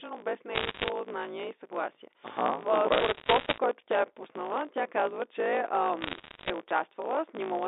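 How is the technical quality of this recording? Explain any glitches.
The recording has two clear faults: a steady buzz with sped-up speech throughout, and three bursts of crackle. The narrow telephone band of the G.711 line, roughly 300 Hz to 3.7 kHz, is audible underneath.

Throughout the clip there is a block size mismatch (truncated). One stage writes longer blocks than the next reads, which fits 1024-sample blocks, and the tail of each is discarded. This produces a 54.4 Hz buzz and speech running 1.16 times fast with its timbre kept. On a spectrogram, this shows as regular vertical seams at that rate.

At 0.54 to 0.89 s, just before "знание и съгласие", there are bit errors on a digital phone line. Flipped bits corrupt single samples, giving sharp ticks over the speech. In the waveform, these appear as isolated one-sample spikes, and on a spectrogram as thin full-band vertical lines.

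The same bit errors recur at 2.92 to 3.58 s, just before "тя е пуснала тя", and at 6.02 to 6.5 s, right after "пуснала тя казва че". Both bursts sound like scattered crackle and show the same lone spikes and thin vertical streaks.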